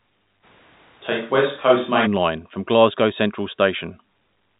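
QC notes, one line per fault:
0.45 to 2.05 s, switch to a distant microphone: the speech suddenly goes roomy and hollow, with the low end thinning out, then snaps back just as abruptly at 2.05 s. The loudness hardly shifts, but the room noise rises to sit roughly 35 dB under the speech. The likely cause is the close mic dropping out and a farther one filling in. The telephone band still tops out near 3.8 kHz across the stretch.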